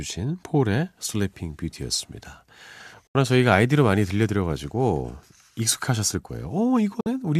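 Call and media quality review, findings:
Digital broadcast dropout, 3.07–3.15 s and 7.00–7.07 s: speech fades out over about 8 ms into silent holes of 72 ms and 48 ms, then resumes later. Receiver muted on lost or checksum-failed frames, consistent with roughly three and two frames dropped; that audio is gone.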